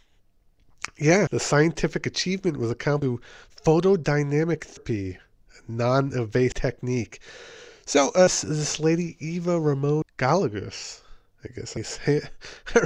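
The audio skips at 1.27, 3.02, 4.77, 6.52, 8.27 and 10.02 s, each jump losing about a third of a second with no gap left behind. It's likely audio missing between chunks: 2-second blocks, each losing that much at the handover.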